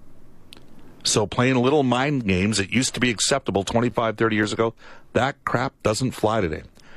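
At 3.90 s, just after "used to be acceptable", the speech drops out in a hard-edged hole of about 9 ms. This is a gap between stream segments: the timestamps of adjacent segments, which appear to be about 6 s long, leave a small gap that is filled with silence, though no audio is lost.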